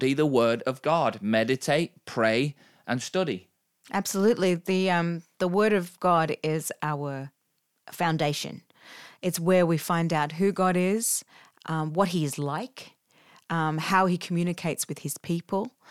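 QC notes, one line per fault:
No faults found in this clip.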